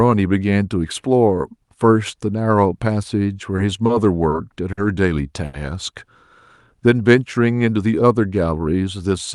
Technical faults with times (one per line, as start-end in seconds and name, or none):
3.56-3.61 short stall from a late packet
3.86-3.92 short stall from a late packet
4.29-4.35 short stall from a late packet
4.72-4.80 short stall from a late packet
5.45-5.56 short stall from a late packet
8.46-8.88 jitter buffer speed-up